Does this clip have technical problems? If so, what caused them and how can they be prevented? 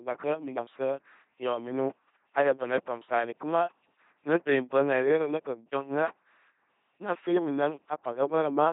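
Yes. Throughout the clip, the speech has passed through an LPC-10 vocoder. It resynthesises each moment from a ten-pole vocal tract filter driven by either a pulse train or noise, with nothing in between. The heavy damage, consistent with a 2.4 kbit/s rate, leaves a buzzing, mechanical robot voice with nothing above 3.8 kHz. To prevent this, carry the speech over a modern waveform-preserving codec at a higher bitrate rather than a 2.4 kbit/s vocoder.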